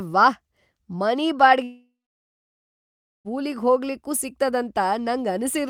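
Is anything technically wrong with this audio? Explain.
Yes, there is a long network dropout. From 1.63 to 3.28 s, the last sound is stretched into a fading buzz, followed by 1.34 s of silence. The speech then resumes with 1.62 s lost, likely because packets never arrived.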